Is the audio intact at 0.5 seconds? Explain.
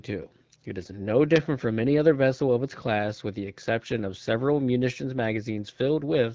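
Yes, the audio is intact at 0.5 seconds, with no fault to be heard at that moment.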